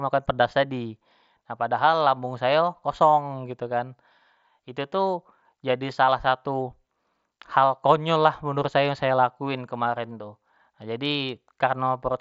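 Speech carried over a Bluetooth mSBC headset link that is working as designed, with no technical fault to report.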